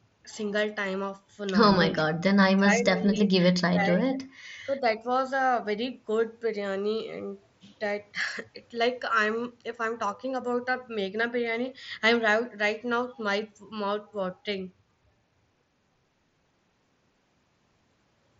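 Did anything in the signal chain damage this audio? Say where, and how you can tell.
Yes, in call processing. Speech dips at 1.84–1.94 s, 2.2–4.18 s and 4.35–5.08 s, by up to about 25 dB. The likely cause is an echo canceller suppressing speech in double talk.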